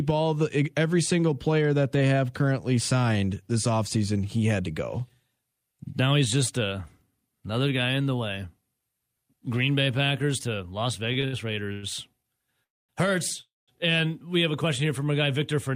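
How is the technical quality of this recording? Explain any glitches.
The speech runs into network trouble near the end, with a stutter and then two freezes packed into about two and a half seconds.

From 11.13 to 12.26 s there are repeated stalls (stutter). Packets arrived too slowly, so the jitter buffer emptied five times. The receiver stretched the last sound to cover roughly 225 ms in total, with the longest hole 99 ms, so the audio drags and hiccups without losing content.

Then come two call audio freezes, at 12.64 to 12.91 s and at 13.41 to 13.70 s, the second just before "and we have a". Each inserts a pause of roughly a quarter second, mostly silent, before speech resumes where it stopped. The likely cause is packets held up in transit, starving the buffer.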